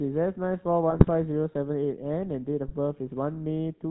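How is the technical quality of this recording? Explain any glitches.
Pretty rough. The whole clip runs through a GSM full-rate codec, and there are two short bursts of GSM bit errors on top of that.

The GSM full-rate coding is plainly audible from start to finish. The codec rebuilds the speech from a vocal-tract filter fed by a sparse, regularly spaced pulse train, which fits the old 13 kbps full-rate mode. That thinned-out excitation gives the voice a buzzy, gravelly grain, and with everything above 4 kHz gone it sounds muffled and phone-like.

The GSM bit errors hit from 0.90 to 1.09 s and again from 2.67 to 2.75 s. Corrupted bits land in the decoder's filter, pitch and gain parameters, so a few frames come out with a warped spectrum or a sudden jump in level. You hear that as a garbled squawk or gargle. The first burst is longer and nastier, which points to a heavier error rate spread across more frames than the brief second one.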